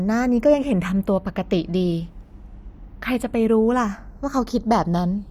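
The channels drift apart for the whole clip. The two sides of this speech appear to come from devices on separate clocks, roughly 70 parts per million out of step. So the delay between left and right slides steadily, reaching only a fraction of a millisecond by the end. Summed to mono, that tiny offset carves comb notches that sweep slowly through the spectrum. It sounds like a slowly moving flange over the speech.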